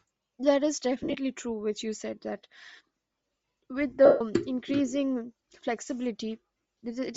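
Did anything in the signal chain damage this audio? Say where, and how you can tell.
Yes. At the codec stage, the speech has a breathy, grainy upper edge the whole way through, plainly audible. That's likely Bluetooth LC3 compression at a low rate, something like 32 kbps with 7.5 ms frames, zeroing chunks of the top end and papering over them with noise fill.

Two network-stage dropouts, both lost LE Audio frames. Around 1.02 to 1.15 s the losses are scattered over roughly 120 ms, the longest run about 50 ms. At 4.05 to 4.21 s there's a solid 150 ms gap. The decoder repeats the last spectrum with scrambled signs, so it smears into noise and fades.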